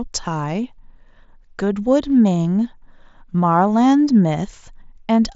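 Nothing stood out on listening to this speech, which comes through a Bluetooth mSBC headset link with its sound ending a little below 8 kHz.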